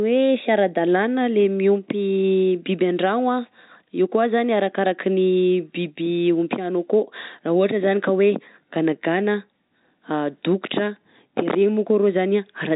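Nothing stood out on listening to this stretch of telephone-band speech.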